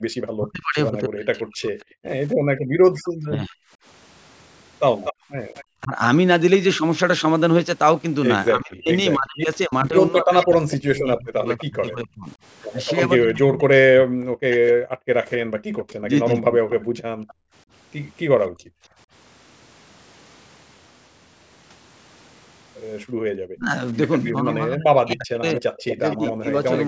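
Background gated by the echo canceller appears in this speech recording from 0.0 to 5.3 s, from 15.45 to 18.91 s and briefly from 23.15 to 23.27 s. While the far end plays through the loudspeaker, the canceller pulls the microphone down hard, so the room tone sinks by about 40 dB in the first stretch, about 27 dB in the second and about 22 dB in the last. It recovers once the canceller releases, and the dips add up to roughly three-quarters of a second in each of the first two spans. Speech suppressed in double talk runs from 0.38 to 16.82 s and again from 23.55 to 26.48 s. The near talker's voice dips, thins or breaks into pieces, falling by something like 40 dB at worst, for around seven seconds in total in the first span and about a second and a half in the second. The likely cause is both sides talking at once, so the canceller cannot tell its own talker from the returning echo and attenuates both. 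Echo leak is heard from 2.29 to 5.64 s, from 10.4 to 18.48 s and from 24.25 to 26.31 s as a delayed copy of the voice trailing it by 243 ms. It sits roughly 10 dB below the speech at first and about 15 dB below later. The likely cause is a loudspeaker at one end whose canceller let part of the pickup through and sent it back. Above all of this, the call's microphone processing band-limits the sound, with nothing above 8 kHz.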